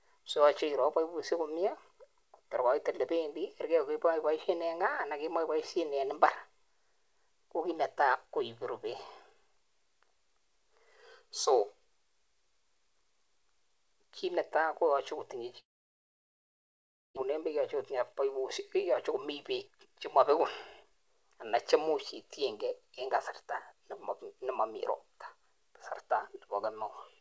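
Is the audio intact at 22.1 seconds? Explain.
No. From 20.83 to 24.71 s a jitter buffer speed-up is active: the receiver trims short pitch-period chunks repeatedly to drain excess buffered delay, about a fifth of a second in total. Speech runs roughly 6% fast at unchanged pitch, sounding slightly hurried.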